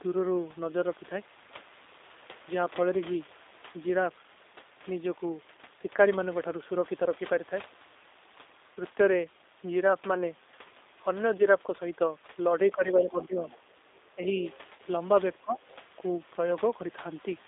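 The speech runs through a G.729 codec for its full length, a low-rate coder consistent with 8 kbit/s that rebuilds the voice from a vocal tract model and sparse pulses. The line passes only about 300 Hz to 3.7 kHz, so the sound is band-limited, plainly rough and slightly synthetic. VoIP packet loss concealed by the speech codec occurs at 8.74 to 8.77 s (20 ms), 11.38 to 11.42 s (10 ms) and 14.77 to 14.80 s (20 ms). The decoder fills each gap by extrapolating its last pitch and filter at falling gain, so the sound briefly smears into a fading, stretched sound and stays weak just afterward. At 13.51 to 13.59 s, a faint burst of the other side's voice leaking through appears, around 30 dB below the speech, likely residual loudspeaker echo that the echo canceller left in the microphone signal. Speech suppressed in double talk follows at 14.15 to 14.30 s and 15.39 to 15.71 s. Here the level sinks by as much as about 15 dB, likely because the echo canceller attenuated everything while both sides were talking at once.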